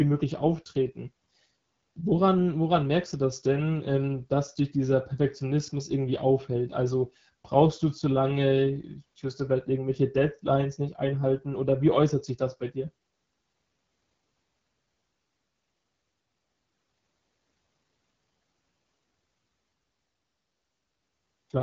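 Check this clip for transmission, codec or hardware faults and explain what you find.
The clip has one codec fault, present for its whole length.

AMR wideband (HD Voice) codec, throughout: the encoder models speech below 6.4 kHz as pulses driving a vocal-tract filter and fills 6.4 to 7 kHz with shaped noise. Nothing is heard above 7.5 kHz. The damage is plainly audible, with a rough, raspy texture on the speech that points to one of the codec's lowest modes, around 8.85 kbit/s, where too few bits remain to code the excitation cleanly.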